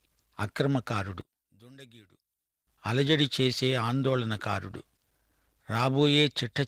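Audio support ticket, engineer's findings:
Speech drops out 1.21 to 2.67 s, level down about 24 dB in the mono sum, leaving a faint residue. Likely one channel inverted: one leg has flipped polarity, so the centred speech cancels when L and R are summed and only the small inter-channel difference survives. Check the cable or patch on that side. Light Opus texture is audible throughout, separate from this.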